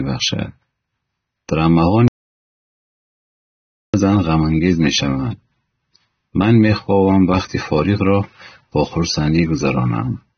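From the first second, the speech has a dull, smeared quality. Nothing is heard above about 6.3 kHz. Sibilants sound fizzy and sustained sounds warble. This is plainly audible codec damage, most likely from AAC compression. The encoder has kept too few bits for the full spectrum. So it cut the top band away and coarsened what remained. The damage points to AAC-LC at a low rate, around 24 kbps.

At 2.08 s the sound stops dead. It returns at 3.94 s. This is an audio dropout to silence, about 1.86 s long. The gap is silent. No room tone or background remains. The cause is likely a lost input, where the recorder kept writing silence. Whatever was spoken in that stretch is gone. The cut-out and return both happen abruptly, mid-flow.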